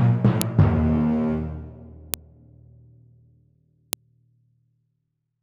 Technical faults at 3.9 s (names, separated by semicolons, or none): file header played as audio